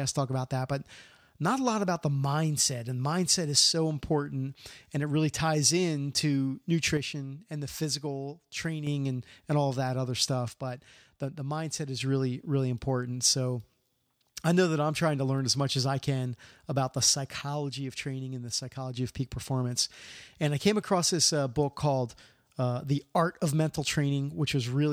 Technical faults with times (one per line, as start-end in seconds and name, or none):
6.97-8.87 one channel drops out
10.48-12.00 one channel drops out
17.41-18.97 one channel drops out